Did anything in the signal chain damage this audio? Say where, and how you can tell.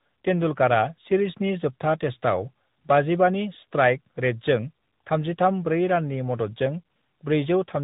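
Yes, at the codec stage: tandem speech coding runs through the whole clip. The speech is rough, muffled and warbly beyond what one codec would do, and a spectrogram shows nothing above 3.8 kHz, with smeared, jittery harmonics and noisy fill between formants. That fits two speech coders in a row, such as G.726 passed over G.711 mu-law into AMR-NB at about 10 kbit/s, each re-encoding the previous one's errors so the damage compounds.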